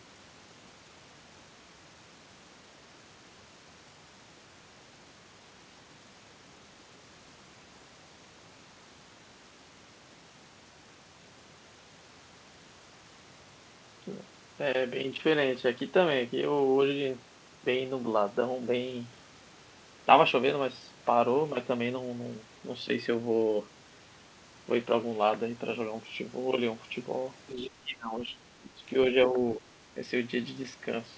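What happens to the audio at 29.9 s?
The speech briefly sinks between 29.94 and 29.99 s, a dip of roughly 10 dB lasting only about 50 ms, so that stretch of sound momentarily recedes before it recovers. The likely cause is speech suppressed in double talk. With both ends active at once, the echo canceller could not tell this talker apart from loudspeaker echo and pulled the level down, briefly clamping the near-end speech along with the echo it was targeting.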